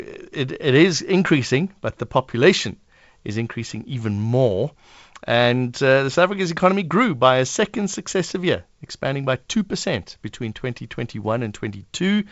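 The speech comes through G.722 wideband telephone coding at 56 kbit/s with no technical faults, its content ending at about 7.7 kHz and the coding leaving only a light trace on the sound.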